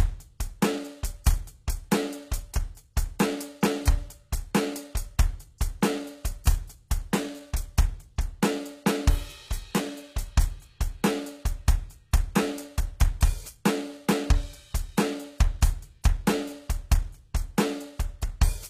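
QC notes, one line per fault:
throughout: HE-AAC compression, likely the cause of the damage heard across this music. The codec damage is plainly audible. The upper spectrum is not the original. It is rebuilt from copies of lower bands, shaped by a coarse envelope. So the treble reaches high but its harmonics do not line up with those below. Bright attacks and sibilant sounds turn gritty and metallic. Nothing is present above 14.9 kHz. The degree of damage fits a very low bitrate, around 20 kbps.
6.44 s: pre-echo. A short hiss arrives just ahead of a sharp attack, spread over about 14 ms. A transform codec spreads its quantisation noise across a whole block. Here the attack lands late in the block. The noise sized for the loud onset therefore also fills the quiet gap before it. The attack loses its crispness and sounds softened and smeared.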